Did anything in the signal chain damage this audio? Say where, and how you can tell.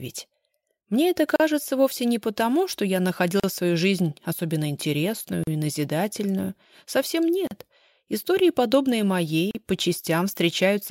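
Yes: gaps at joins of encoded pieces, at 1.36, 3.40, 5.44, 7.47 and 9.51 s. Each is a dropout of about 38 ms with smeared edges, after which the sound resumes where it stopped. The fault sits at the codec stage. The audio was encoded in separate pieces about 2 s long and concatenated untrimmed, so each join keeps the encoder's start-up delay and last-frame padding as silence.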